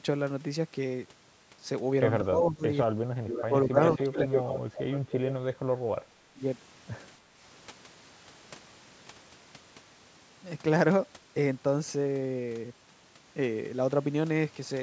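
From 2.22 to 4.54 s the speech sinks and breaks up. This is speech suppressed in double talk. Both ends were likely talking at once. The echo canceller could not tell its own talker from the far-end echo, so it turned everything down. The cuts add up to around a second. At their deepest the speech falls by roughly 30 dB. It sounds dipped and fragmented rather than simply quiet.

Inside that stretch, from 3.27 to 3.44 s, a delayed copy of the speech appears. This is echo leak. It trails the original by 271 ms and sits roughly 10 dB below it. A longer leak follows from 3.85 to 5.33 s, now only roughly 5 dB down. The cause is likely a loudspeaker at one end. Its canceller did not remove all the sound the microphone picked up, and the rest came back as a second, late voice.

At 6.34 to 6.40 s there is a second, brief case of speech suppressed in double talk. It lasts about 70 ms and dips roughly 15 dB. 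It is likely the same overlap problem, just shorter. It is heard as a quick dip.

From 7.23 to 7.39 s the background is gated by the echo canceller. The room sound drops by about 6 dB for some 150 ms and then returns. The canceller clamped the microphone while the loudspeaker played, then released it.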